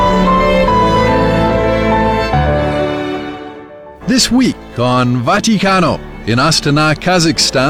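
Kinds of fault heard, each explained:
Nothing stood out on listening as a technical problem anywhere in the audio.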